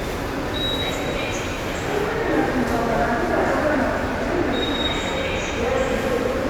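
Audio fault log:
No faults are heard in this recording of sounds. Nothing in it calls for an entry in the log.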